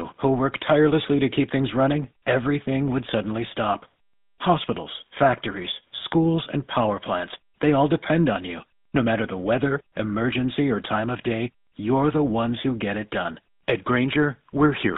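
From start to finish the speech has a buzzy, gravelly roughness, and it sounds boxed into a narrow telephone band, from about 150 Hz up to 3.7 kHz, with nothing above. That roughness is the mark of the GSM full-rate codec, which fits 13 kbps coding. It rebuilds the voice from a vocal-tract model fed with regularly spaced pulses and keeps only a thinned-out excitation, so the damage is plainly audible throughout.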